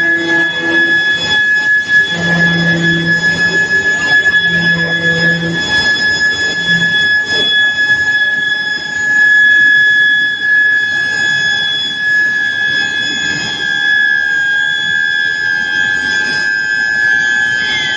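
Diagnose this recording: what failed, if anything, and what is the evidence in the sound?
Nothing in this recording points to a failure at any stage of the chain. Listening closely turns up no evidence of a problem in the capture, conversion, transmission or playback of the sound.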